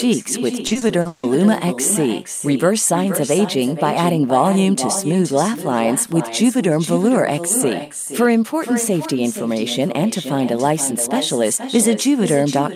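Echo with no canceller runs through the whole of this speech clip: every phrase returns about half a second later as a fainter copy, about 10 dB below the direct speech, and thinner. The far end is playing the call through a loudspeaker, its microphone is catching that playback, and nothing subtracts it before it travels back, so the talker hears themselves after the network round trip. Repeated packet loss (robotic sound) occurs from 0.67 to 1.25 s, where the speech turns choppy. Packets go missing or arrive too late again and again in that stretch, and the receiver covers each hole by stretching out the last sound it had. The holes come close together, with the longest lasting 160 ms, so about half of that span is patched-in sound rather than real speech. That is what gives the passage its broken-up quality, with pieces missing.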